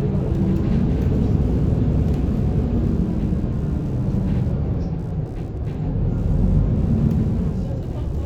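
Throughout, computer activity noise, a faint buzzing ground interference, pulses at around 70 Hz, roughly 40 dB below the sound. Unlike steady mains hum, it fluctuates with computer load.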